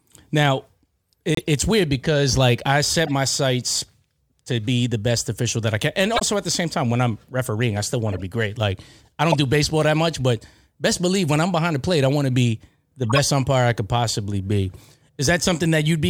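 Corrupt frame muted at 1.35 to 1.46 s: damaged compressed frames were rejected and replaced with silence, leaving an abrupt 0.12 s hole in the speech that fits about four frames. Corrupt frame decoded at 3.06 to 3.09 s, 6.14 to 6.22 s, 8.07 to 8.22 s, 9.30 to 9.35 s, 13.10 to 13.19 s and 14.74 to 14.78 s: bit-damaged frames were played anyway, misplacing energy across frequencies and producing short chirps or noise bursts spanning a few frames each.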